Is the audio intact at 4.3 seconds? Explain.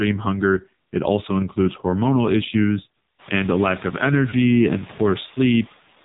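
No. Just after "and a lack of", from 4.30 to 4.35 s, there are lost AMR speech frames. A single 20 ms frame failed its checksum, so the decoder reused the previous pitch and vocal-tract settings at reduced gain. This produces a brief dip or warble before the sound returns weak or rough for a moment.

The whole passage also carries the AMR narrowband mobile codec at 5.9 kbps. With nothing passing above 4 kHz and so few bits per frame, the sound is heavily damaged, buzzy and synthetic.

Noise suppressor artifacts are present as well. The suppressor cuts what it judges steady noise by about 12 dB per band, frame by frame. The room noise, which has risen since about 3 s, therefore sinks and swells around the sound.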